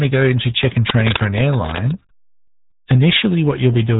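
A speech recording that has passed through the RealAudio 14.4 codec and carries a burst of cable scratch noise. The whole clip sounds muffled and gargly, with heavy codec damage: the low-rate coder keeps only a rough model of each short frame of speech, which fits the 8 kbit/s rate of RealAudio 1. On a spectrogram, energy stops abruptly at 3.8 kHz with nothing above it, and the remaining bands look smeared and blotchy. From 0.88 to 1.94 s a dense, uneven scratching and rustling rides over the speech, nearly as loud as the speech itself. The likely cause is a worn cable, connector or control being moved, so that its contact resistance jumps rapidly. The waveform shows jagged, irregular spikes piled onto the signal across that second. The spectrogram shows broadband vertical streaks and speckle filling the band up to the 3.8 kHz ceiling.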